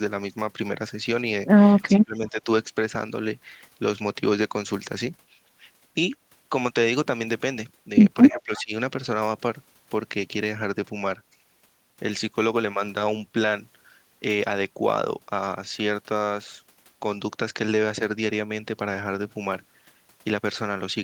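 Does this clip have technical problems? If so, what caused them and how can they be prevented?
Yes. From 1.9 to 2.48 s and 8.31 to 8.72 s the speech drops by roughly 20 dB, leaving notches in the waveform envelope. This is likely speech suppressed in double talk, where the canceller ducks its own talker along with the loudspeaker echo when they overlap. Better double-talk detection prevents it.

From 8.3 to 8.6 s a faint copy of the speech follows 317 ms behind, about 25 dB down. On a spectrogram it shows as a weak, displaced ghost pattern. This is likely echo leak from a loudspeaker on one side of the call. A headset prevents it.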